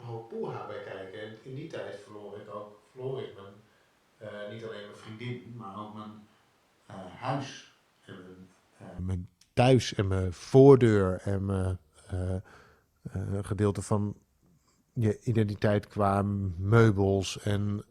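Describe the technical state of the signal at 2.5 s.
Switch to a distant microphone, from the start to 8.99 s: the close microphone's signal was likely lost, leaving roomy, hollow, thinner speech about 10 dB quieter, with noticeable room noise.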